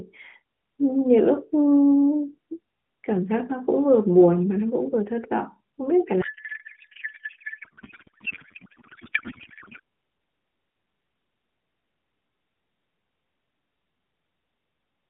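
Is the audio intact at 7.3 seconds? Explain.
No. At 7.3 s the clip is inside a codec payload misread running from 6.22 to 9.80 s. The decoder unpacks the AMR bits in the wrong layout, likely octet-aligned frames read as bandwidth-efficient. The speech becomes garbled noise and warble that barely tracks it.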